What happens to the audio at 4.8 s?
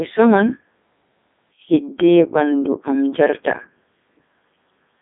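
At 4.8 s the speech is still under the Codec 2 vocoder damage that runs through the whole clip. The decoder rebuilds the voice from sine waves driven only by pitch, voicing, energy and envelope, so it sounds robotic and buzzy, with heavy damage even at Codec 2's top 3.2 kbit/s mode. A spectrogram shows a line band of 200 Hz to 3.6 kHz with nothing above 3.7 kHz, and the waveform no longer follows the original's shape.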